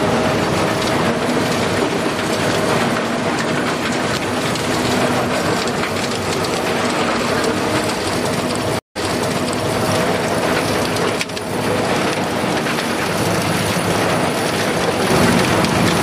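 At 8.79 s a stream reconnect occurs: the connection dropped and the player restarted its decoder mid-stream. The sound cuts to silence for 164 ms, then resumes 813 ms earlier, repeating that stretch of audio, with the disturbance running to 9.77 s.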